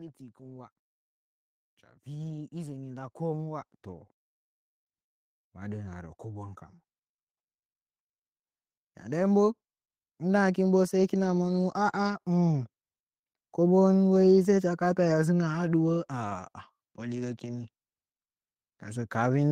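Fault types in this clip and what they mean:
automatic gain rising: The gain control judged the input too quiet and turned its gain up gradually, so speech and the background noise behind it swell together. Here it climbs by about 8 dB from 2.05 to 4.14 s, then by about 4 dB from 5.54 to 6.65 s. Because the noise floor rises in step with the speech, this is a gain change rather than someone speaking louder, and the slow ramp over a second or more separates it from an abrupt level jump.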